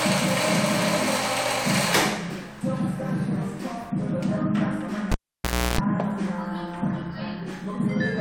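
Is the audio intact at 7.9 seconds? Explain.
Yes, the audio is intact at 7.9 seconds, with no fault present at that moment.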